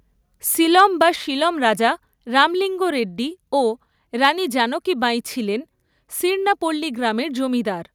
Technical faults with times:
0.79-0.81 microphone overload
4.24-4.28 microphone overload

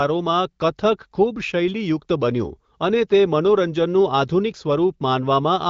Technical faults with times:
none

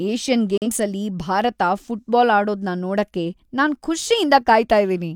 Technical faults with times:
0.58-0.67 digital broadcast dropout

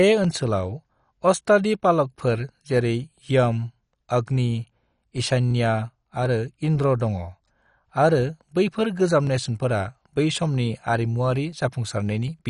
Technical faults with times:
0.00-12.49 MP2 compression
0.24-12.28 clock drift buffer slips

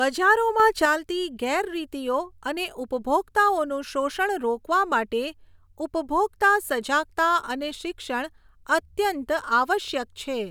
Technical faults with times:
0.60-0.85 sudden gain jump

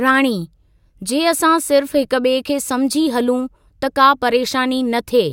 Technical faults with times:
none

